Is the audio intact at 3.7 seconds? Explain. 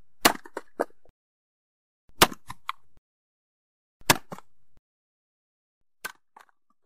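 Yes, the audio is intact at 3.7 seconds, with no fault heard at that moment and any gradual level change there sounding like an ordinary fader move rather than a defect.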